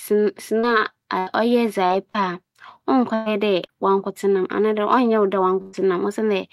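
At 0.59, 1.87, 2.10 and 3.66 s there's short concealed packet loss: roughly 40 ms never arrived, so the receiver stretched the previous sound and left a brief smear. Bursts of packet loss at 1.19, 3.14 and 5.62 s drop 80 to 120 ms each, heard as a held buzz or fading hiss before the audio jumps ahead.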